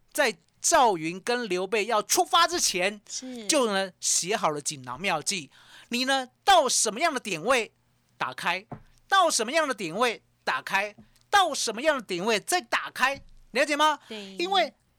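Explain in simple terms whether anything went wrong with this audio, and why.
Nothing went wrong with this speech recording that a listener can pick out. At no point does the sound break up, jump, or change in a way that would point to a technical problem.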